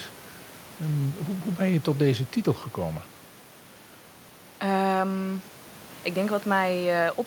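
A speech recording with quiet room noise in the background, and nothing technically wrong with it.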